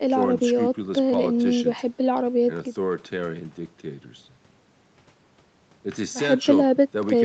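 No technical faults are audible.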